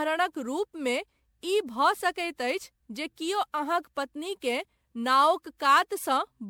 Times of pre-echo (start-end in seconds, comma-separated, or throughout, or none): none